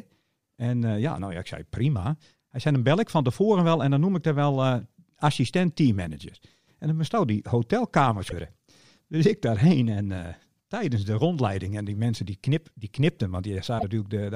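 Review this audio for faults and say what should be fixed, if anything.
A short glitch breaks into the speech from 8.27 to 8.33 s and again from 13.76 to 13.84 s, the signature of damaged data in a compressed stream: corrupted bytes in those frames leave the decoder misreading them and losing sync until the next valid frame header. Protect the file or stream with checksums on storage and transfer so damaged frames are caught and re-sent rather than decoded.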